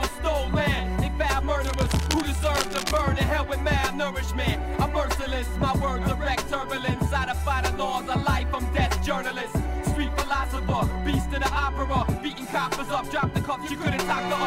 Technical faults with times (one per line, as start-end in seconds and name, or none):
1.64-3.02 cable scratch noise